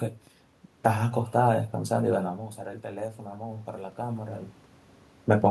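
A speech recording with automatic gain rising from 2.81 s to 4.51 s. Just before this, around 2.5 s, the talker moves and the voice drops by about 13 dB at the microphone. The gain control hears the quieter input and pushes its gain up slowly, by about 6 dB over 1.7 s. Voice and room noise swell together through that stretch. Near 4.5 s the talker moves again.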